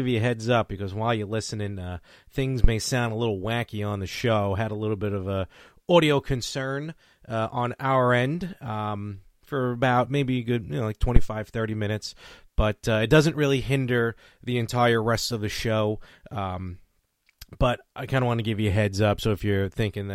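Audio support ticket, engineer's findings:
Phantom power thump, 2.64–2.71 s, between "you're listening uh things" and "sound a little wacky": deep low-frequency thump peaking near -3 dBFS, decaying in 15 ms. Supply switched on or off on a live input, with the step passing through the coupling capacitors.

Phantom power thump, 11.16–11.30 s, after "good you know like": same signature, peaks near -2 dBFS, 30 ms decay. Unlike a plosive, it has no breath onset and is not tied to any syllable.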